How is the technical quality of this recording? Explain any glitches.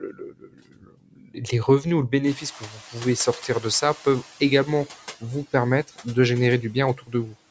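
The recording has two kinds of problems, both from the noise suppressor. It clips parts of the speech in four places, and it's slow to react when the room gets noisier. The call's mic processing is also audible: the audio stops at 8 kHz and the deepest bass is trimmed.

Speech cut by the noise suppressor shows up from 0.01 to 1.42 s, where roughly a second of the opening gets pulled down by up to about 19 dB. It happens again from 2.6 to 2.97 s (about 12 dB), 5.84 to 6.07 s (about 16 dB) and 6.96 to 7.35 s (about 14 dB). Each time the suppressor judged quiet speech to be background and turned it down with the noise, so those bits sound swallowed and faint.

The noise suppressor catching up runs from 2.26 to 4.25 s. Around 2.5 s the room noise jumps by about 19 dB and then sits about 20 dB under the speech. The suppressor's noise estimate takes about 2 s to follow that jump. Until it does, the noise comes through with only about 7 dB of reduction, and then it sinks once the estimate settles.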